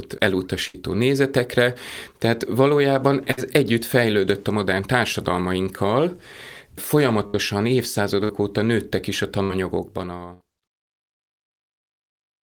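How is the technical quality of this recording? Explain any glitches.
The recording has repeated dropouts from a burst of packet loss, at 0.67, 3.32, 7.27, 8.24, 9.43 and 10.33 s. Each time about 60 ms of speech went missing, and the receiver stretched and faded the last sound for 53 to 66 ms before jumping ahead, so you hear a brief held buzz or hiss. The last dropout comes during the smooth fade-out that ends at 10.68 s.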